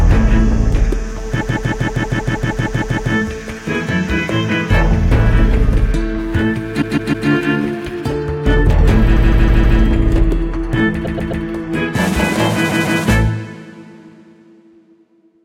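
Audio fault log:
1.40–3.12 s, repeated frames: a 0.16 s stretch loops eleven extra times as a long stutter, because the same compressed block was replayed, adding 1.72 s.
6.81–7.28 s, repeated frames: the same 0.16 s stutter, three extra plays, adding 0.47 s.
9.16–9.78 s, repeated frames: a 0.16 s block from the duplicated data plays four extra times, adding 0.63 s.
11.04–11.43 s, repeated frames: a slightly shorter 0.13 s loop, three extra plays, adding 0.39 s.
12.68–13.00 s, repeated frames: a brief 0.16 s stutter, two extra plays, adding 0.31 s.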